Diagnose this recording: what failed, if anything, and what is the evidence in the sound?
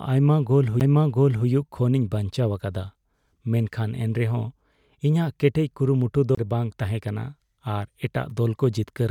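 A tick and an abrupt break in the speech at 0.80 s, then again from 6.35 to 6.37 s, each time resuming from a different point rather than where it left off. The first silence lasts about 10 ms; the second is about three times longer, around 30 ms. These are CD skips at the playback stage: the laser lost its track and landed on another turn of the disc's spiral, so the player muted briefly and carried on from the new position.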